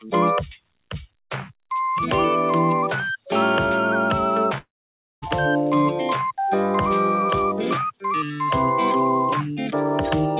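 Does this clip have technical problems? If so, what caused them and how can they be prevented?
Yes. From 4.58 to 5.24 s there is a long network dropout. The last sound smears into a fading buzz or hiss, then near silence. The likely cause is lost packets. A steadier connection, or a larger jitter buffer, would prevent it.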